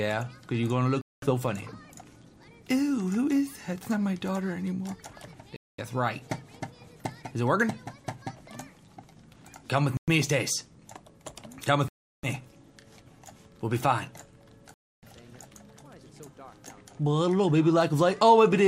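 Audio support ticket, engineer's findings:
Silent gaps at 1.01, 5.56, 9.97, 11.88 and 14.74 s, 0.11 to 0.35 s long. Likely Bluetooth stall: delayed packets drained the headphone buffer until resends arrived.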